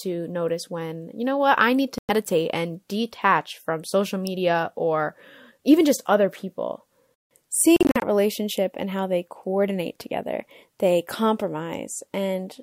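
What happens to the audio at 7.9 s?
Around 7.9 s there is a Bluetooth dropout, spanning 7.76 to 8.04 s: short silent holes with abrupt or briefly faded edges, about 150 ms in total over about 256 ms, the longest near 43 ms, likely from packets arriving too late. Unlike a buffer underrun, the sound resumes as though it had kept playing.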